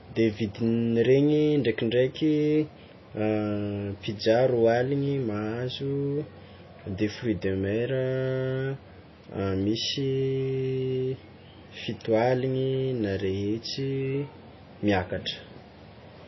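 MP3 compression damage runs through the whole of this speech recording, start to finish, and is plainly audible. Nothing survives above about 5.8 kHz, so sibilants lose their edge, and the remaining detail has a watery, swirling quality. That is the signature of a likely MP3 encode starved of bits, consistent with something around 24 kbps: the encoder lops off the treble at a fixed point and drops quiet frequency components that flicker in and out between frames.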